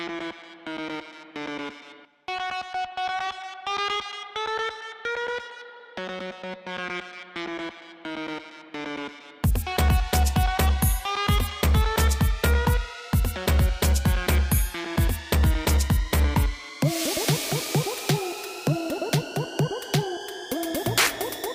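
No technical faults can be heard in this audio.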